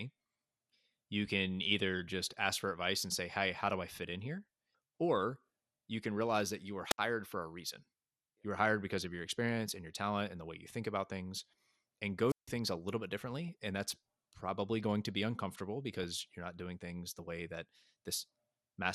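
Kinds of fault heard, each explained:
MP2 compression: The whole speech clip has the dull, band-limited sound of MPEG Layer II coding, likely at a low rate near 80 kbps. The top sub-bands are switched off and the bands that remain are coarsely quantised, so the damage is plainly audible as a granular, gurgling roughness under every phrase. Unlike burbling, it is constant and steady rather than bursting out at particular moments.
DAB burbling: Corrupted MP2 data gets through error correction and puts brief blips of noise into single sub-bands. It happens at 2.33 s, between "you can either just" and "ask for advice and", at 13.48 s, after "a little bit", and from 16.03 to 16.13 s, between "going to be uncomfortable" and "you're not doing things". These are short noise blips over the speech, not silences.
Wireless microphone squelch dropout: The radio link from an FM microphone fades and the receiver's squelch mutes the output, leaving a hole of near silence. 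This happens from 6.90 to 6.98 s, with about 66 ms muted, and from 12.28 to 12.50 s, with about 159 ms muted. Burbling adds squelchy sound, while this fault takes sound away: a brief rise of hiss, the gap, then the speech returns.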